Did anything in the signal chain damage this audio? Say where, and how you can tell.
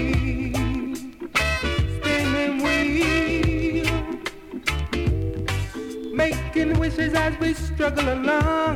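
No, nothing in the signal chain stood out as damaging this audio on listening.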